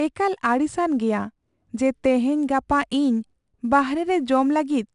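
Throughout, 4-bit ADPCM compression adds gritty, level-following hiss to the speech and roughens sharp onsets, with nothing above 10.6 kHz, consistent with roughly 89 kbps.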